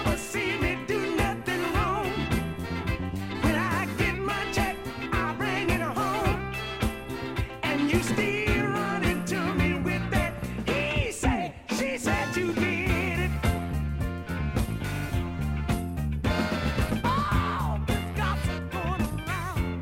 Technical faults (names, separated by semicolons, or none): none